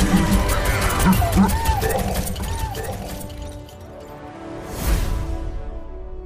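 A doubled audio track runs from 2.40 s to 5.20 s: a second, full-band copy of the audio trails about a second behind, roughly 10 dB quieter, with no decay or room colour, and it switches on and off abruptly. This likely comes from a slower second capture path or an edit that left two out-of-step copies.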